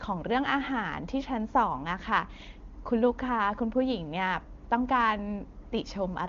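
No technical faults are audible.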